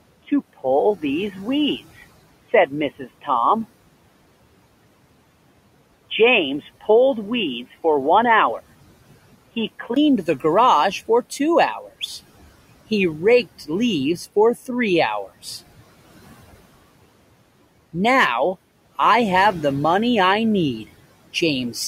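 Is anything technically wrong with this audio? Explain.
Yes. From 0.0 to 9.96 s the speech sounds dull and boxy, with faint added background noise. This is likely an input switched to a poorer, narrower-band device, before a 20 ms gap at 9.96 s.

Between 2.99 and 3.28 s, parts of the speech turn faint and swallowed, dropping by about 13 dB. This is speech cut by the noise suppressor, which mistook roughly a tenth of a second of it for background noise.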